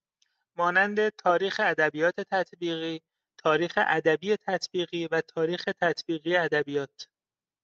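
The speech in the clip shows no technical fault. It has passed through a call path whose codec limits the audio to about 8 kHz, as an Opus call would, and nothing in that path stands out as wrong.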